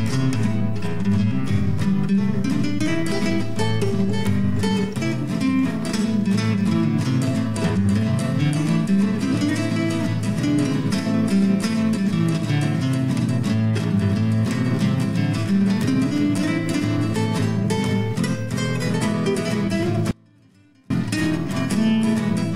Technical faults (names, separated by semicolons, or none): audio dropout to a faint residue